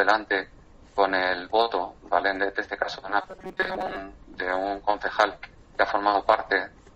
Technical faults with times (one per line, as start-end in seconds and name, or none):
3.22-3.96 robotic sound from repeated short buffers